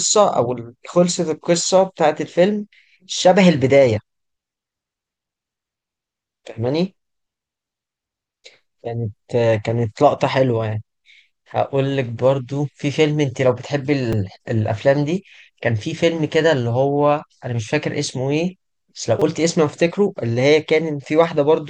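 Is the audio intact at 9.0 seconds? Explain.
Yes, at 9.0 seconds the speech plays through cleanly, with no dropout, click, distortion or other fault at that moment.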